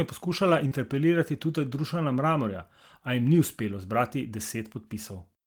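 Short concealed packet loss at 0.67 to 0.72 s: about 40 ms of speech arrived too late, so the decoder extended the preceding sound, leaving a brief smeared wobble.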